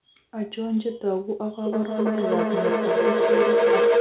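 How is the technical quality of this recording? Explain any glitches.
The recording is marred by a feedback howl from 1.66 s to the end. A loudspeaker and microphone on the same call form a loop that gains level each trip, so repeats about a third of a second apart swell and narrow to a tone around 500 Hz, peaking about 7 dB above the speech. Echo repeats fade; these keep building. Nothing above 4 kHz comes through the call path, which points to a narrowband codec such as G.711.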